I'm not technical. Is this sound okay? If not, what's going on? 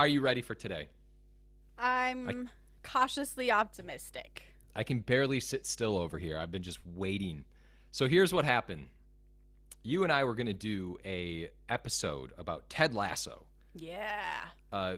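No. A steady low 50 Hz hum, called mains hum, runs under the speech throughout. It's a smooth constant tone from electrical power leaking in, not a crackle or rising buzz.

At 10.53 s and again from 11.73 to 11.79 s, the speech briefly turns rough. This is a lost packet rebuilt from error correction. There is no silent gap, just a moment of coarser, noisier sound.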